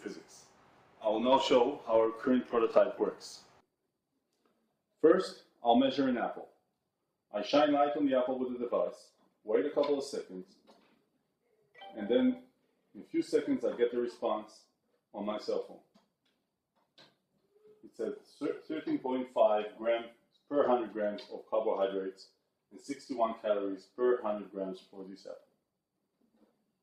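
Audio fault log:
Nothing stood out as a problem on listening.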